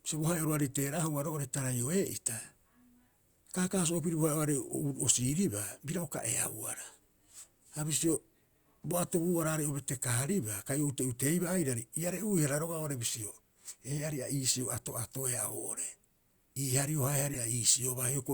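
At 17.33 to 17.38 s, just after "hario hae", a short burst of misplaced sound cuts into the speech: a corrupt frame decoded. Flipped bits in a couple of compressed frames led the decoder to read wrong gains and codes, so energy landed at the wrong frequencies for roughly 40 ms, peaking at about -25 dBFS. It sounds like a brief chirpy blip. Unlike a concealed packet loss, which smears or mutes, this adds tonal garbage that was never there.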